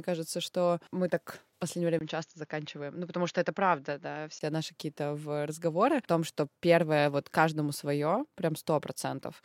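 An input switch to a poorer device runs from 1.99 s to 4.41 s, starting just after "мы так в последнее". A brief gap of about 20 ms marks the switch, and the speech then turns duller and boxier, with nothing above 6.9 kHz, along with a faint new background noise well below the speech. The loudness barely changes. The likely cause is the recording path jumping to another microphone or headset profile before switching back at 4.41 s.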